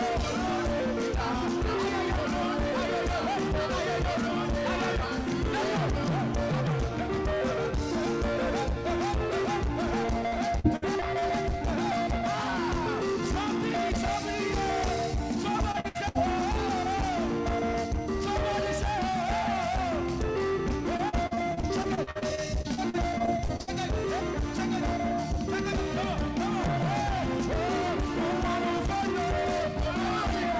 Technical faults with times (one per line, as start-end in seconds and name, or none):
10.28-11.24 repeated packet loss (robotic sound)
15.52-16.17 repeated packet loss (robotic sound)
20.97-23.69 repeated packet loss (robotic sound)